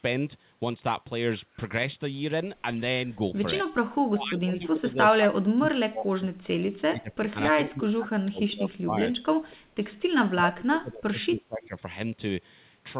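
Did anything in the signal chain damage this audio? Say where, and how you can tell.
Yes. The speech sinks from 4.1 to 7.37 s, 7.53 to 9.96 s and 10.38 to 11.77 s, dropping by about 30 dB (about 25 dB in the last stretch). This is likely speech suppressed in double talk: during call processing, the echo canceller could not separate the talker from the overlapping far-end echo and turned both down. The narrowband ceiling at 4 kHz comes from the call codec.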